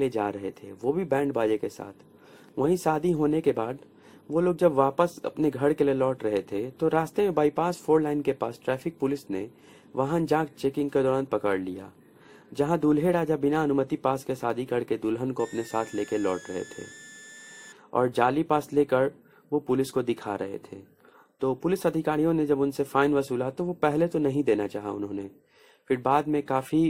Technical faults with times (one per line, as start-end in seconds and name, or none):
0.00-26.90 periodic clock jitter
15.39-17.72 switching supply whistle